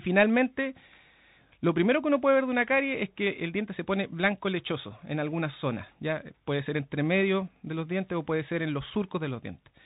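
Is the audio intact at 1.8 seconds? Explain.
No. At 1.8 seconds, as across the whole clip, the speech carries Bluetooth CVSD headset codec damage. Each sample is coded as a single up-or-down step that adapts in size, which fits a 64 kbps link. Nothing passes above about 3.8 kHz. Fast, bright sounds outrun the step, so s sounds turn scratchy over a grainy hiss.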